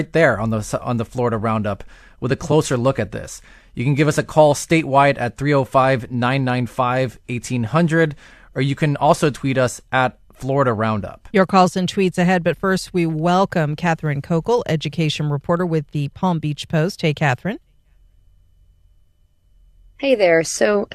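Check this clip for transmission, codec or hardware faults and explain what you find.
Nothing turned up on a listen here: the speech comes across without any transmission, codec or hardware trouble to point to.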